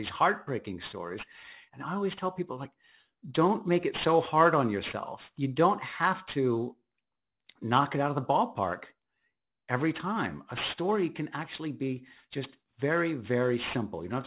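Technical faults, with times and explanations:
Throughout, aliasing: the sibilants come across gritty and metallic instead of crisp, and the spectrum runs right up to a hard wall at 4 kHz. That points to the audio being dropped to something like an 8 kHz rate without a proper low-pass first, so everything above 4 kHz folded back down as false, unrelated tones. The folded energy sits about 15 dB below the speech itself.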